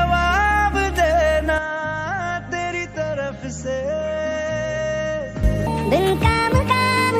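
From 1.58 to 5.43 s the input was likely switched to a poorer device, so the band narrows and the level drops about 5 dB. From 5.67 s to the end, a section at the wrong speed, likely fitted to the wrong clock, plays 1.46 times fast and sounds about seven semitones higher.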